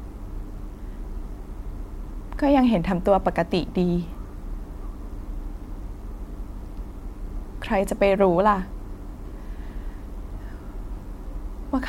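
Speech recording with no technical faults audible anywhere in it.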